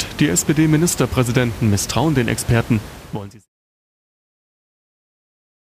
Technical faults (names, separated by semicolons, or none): none